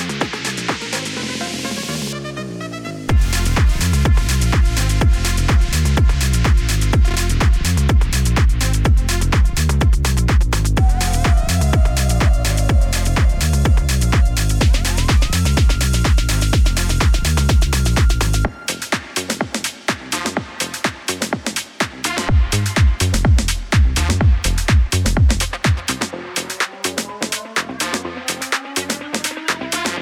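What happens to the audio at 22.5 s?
Nothing goes wrong at 22.5 s; the audio plays through that moment intact, with no audible fault.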